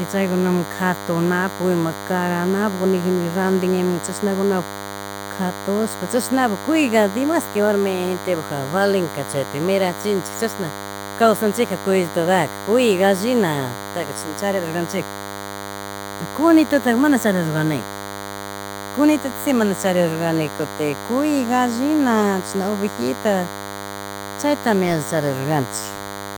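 From start to finish there's a DECT cordless phone buzz under the speech: a thin, steady 100 Hz drone full of harmonics, sitting only about 10 dB below the talker. A nearby handset or base is pulsing every 10 ms, and some audio stage is rectifying those bursts.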